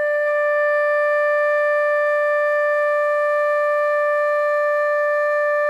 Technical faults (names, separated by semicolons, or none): none